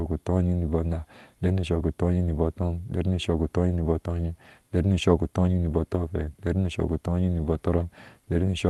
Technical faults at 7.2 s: none

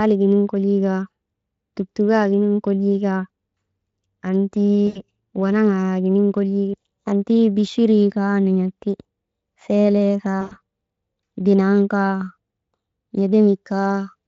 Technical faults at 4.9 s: VoIP packet loss concealed by the speech codec

